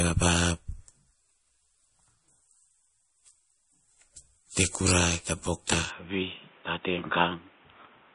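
From the start the speech carries plainly audible MP3 compression, likely from a low bitrate near 38 kbps. With too few bits, the encoder cuts everything above 10.6 kHz and drops weak frequency lines that flicker in and out between frames, giving a watery, swirly texture and smeared consonant onsets. A spectrogram shows a hard ceiling at 10.6 kHz and patchy, blocky holes in the upper bands, flickering from frame to frame.

At 5.91 s the input switches to a poorer device, most likely a different microphone or a headset call profile, with no gap at the changeover. From there to the end the band stops at 3.8 kHz, so the voice turns dull and boxy, drops by about 5 dB, and gains a new noise floor roughly 30 dB under the speech. The spectrogram's ceiling falls abruptly at that moment, and the waveform envelope steps down.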